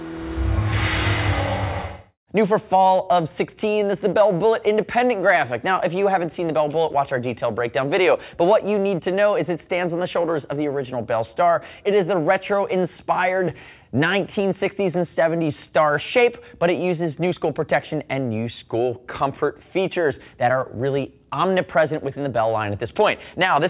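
No technical faults can be heard in the audio.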